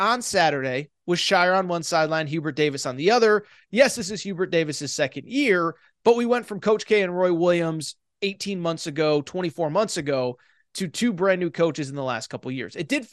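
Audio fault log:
throughout, MP2 compression: The speech sounds dull and gurgling, with a granular roughness. The top end flickers as upper bands drop in and out. The likely cause is MPEG Layer II coding starved of bits, fitting about 80 kbps, which shuts off high sub-bands and coarsely quantises the rest.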